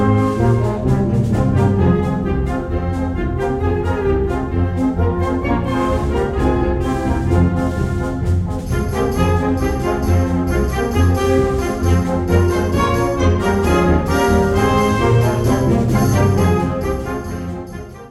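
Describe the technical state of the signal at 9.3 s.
At 9.3 s the signal is intact, with no dropout, distortion, glitch or other technical fault to be heard at that moment.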